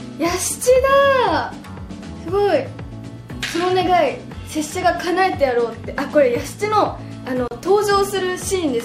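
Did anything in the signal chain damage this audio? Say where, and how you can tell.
Yes. There is a gap at a join of encoded pieces, introduced at the codec stage when separately encoded segments were spliced. At 7.48 s the sound drops out for about 34 ms, until 7.51 s. The edges of the silence are smeared by the codec. Afterwards the sound resumes where it stopped, with nothing missing. That points to encoder start-up delay and end-of-file padding left untrimmed at the splice.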